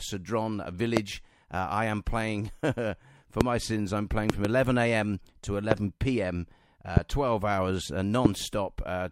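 Loud pops land at 0.97–0.99 s, just before "uh I am playing", at 3.41–3.43 s before "my sins I'm playing", and as a double pop at 4.30–4.47 s after it. Further pops follow at 5.71–5.74, 6.97–6.99 and 8.25–8.28 s. Each peaks about 25 dB above the sound, the last about 20 dB. These are likely voltage pulses from static or a switching glitch. The sound continues underneath each pop rather than dropping out.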